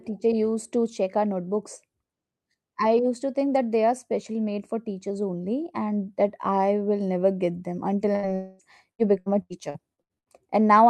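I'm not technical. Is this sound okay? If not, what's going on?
No, not entirely. Right after "never get them until", around 8.15 to 8.26 s, there's a burst of packet loss: roughly 80 ms of the call went missing, and the receiver papered over it by stretching out the last sound briefly before jumping ahead.

Just after, from 8.35 to 8.62 s, it stretches into a long network dropout, most likely a brief network hiccup. About a quarter of a second is gone, filled by the previous sound trailing on as a fading buzz or hiss rather than falling silent, then the audio picks up later.

From 8.91 to 10.29 s there's repeated packet loss, which gives it that robotic sound. Seven small holes, the longest about 80 ms, each patched by repeating the last bit of sound, so about a third of that stretch is filler and it comes out choppy.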